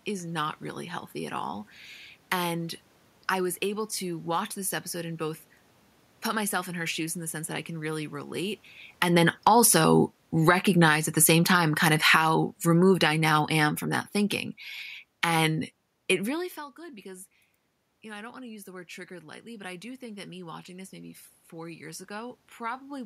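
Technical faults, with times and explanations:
8.87–16.51 s, automatic gain falling: after the talker comes closer at about 8.5 s, the automatic gain control judges the input too loud and gradually pulls its gain down by about 13 dB, so the speech and the room noise behind it sink together over several seconds.
16.57–22.46 s, automatic gain rising: the talker moves away at about 16 s, dropping the input by about 18 dB. The gain control slowly raises its gain by about 6 dB, so speech and room noise swell together, without fully recovering the lost level.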